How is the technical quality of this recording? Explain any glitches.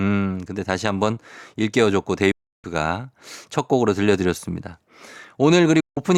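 The speech is interrupted twice by sudden silences, at 2.31 to 2.65 s and at 5.80 to 5.98 s. Each is a digital broadcast dropout. The receiver stopped getting valid frames, muted with a quick fade of about 8 ms, and resumed once good data returned, so whatever was sent during each gap is lost.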